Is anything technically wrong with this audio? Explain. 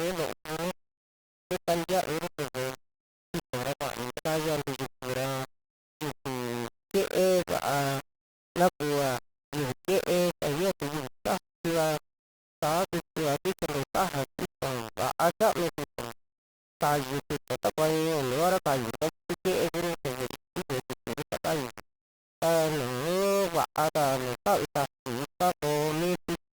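Yes. Throughout the speech there is grainy distortion that rises and falls with the speech, and it most likely comes from a low bit depth without dither. The signal was likely rounded to very few levels, which fits 4 bits, with no noise added to break up the error. The error is therefore tied to the waveform and sits only about 10 dB below it, so quiet passages turn harsh and gritty and the faintest sounds sputter or vanish. Dithered requantisation would instead leave a steady hiss that stays put between phrases.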